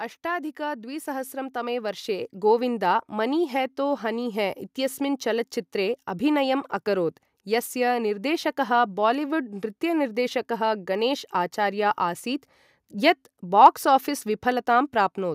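Automatic gain rising runs from 0.27 to 4.46 s in this speech clip, ending just before "इत्यस्मिन् चलच्चित्रे अभिनयम् अकरोत्": the gain control judged the input too quiet and ramped up by about 10 dB over four seconds, so voice and background swell together.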